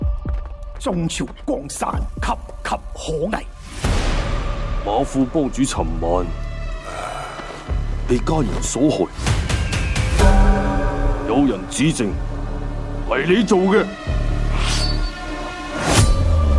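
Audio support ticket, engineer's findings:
No faults found on playback.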